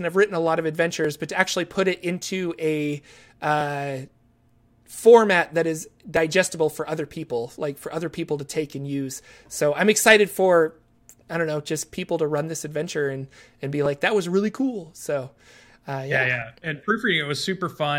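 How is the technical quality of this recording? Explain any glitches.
The recording has one recurring glitch. Clock drift buffer slips: about seven regular clicks every 2.57 s from 1.05 to 16.42 s, likely from mismatched device clocks drifting around 500 ppm. Each slip drops or repeats about 70 samples, showing as a waveform discontinuity and a thin vertical broadband line on a spectrogram.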